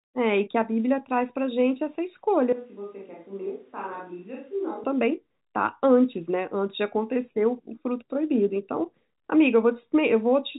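From 2.53 to 4.84 s, the speech abruptly turns roomy and hollow. It drops roughly 10 dB, loses bass, and faint room noise rises. This is likely a switch to a distant microphone after the close one failed. The return at 4.84 s is equally sudden.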